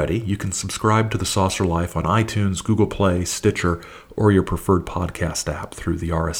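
No audible technical faults turn up anywhere in this speech recording.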